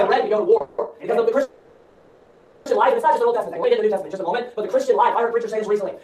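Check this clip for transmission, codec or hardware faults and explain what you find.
Two kinds of network timing fault appear, both early in the clip, and nothing is lost from the audio in either case.

At 0.57 to 0.61 s there is a short stall from a late packet. A packet missed its playout deadline, the jitter buffer emptied, and the receiver held the last sound for about 30 ms before resuming exactly where it left off. It is heard as a brief stretched, faintly buzzy moment. On a spectrogram it shows as a thin vertical strip of smeared, repeated texture. In the waveform, a short run of near-identical cycles replaces normal variation.

Call audio freeze follows directly at 0.61 to 0.79 s and again at 1.43 to 2.67 s. The likely cause is packets held up in transit until the jitter buffer ran dry. The receiver padded the wait by continuing the last sound, about 170 ms the first time and about 1.23 s the second, and then carried on with nothing skipped. 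Each freeze is heard as a held buzz or hiss that fades but never drops to silence. On a spectrogram it appears as flat horizontal streaks that lose energy and detail over time. The waveform shows a decaying, repetitive envelope without a true gap. Everything after each freeze plays late by that amount.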